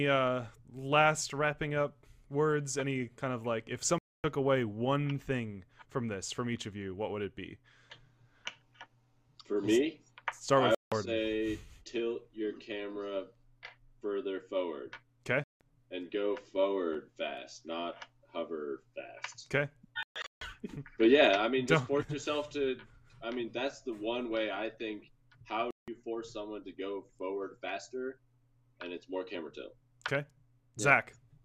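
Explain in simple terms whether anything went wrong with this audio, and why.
The sound cuts out five times: 3.98 to 4.24 s, 10.75 to 10.92 s, 15.44 to 15.61 s, 20.03 to 20.42 s (broken into short gaps), and 25.71 to 25.88 s. These are likely a Bluetooth dropout, where sound data arrived too late and was thrown away. Unlike a pause or stutter, playback picks up further along, so the missing bit is simply skipped.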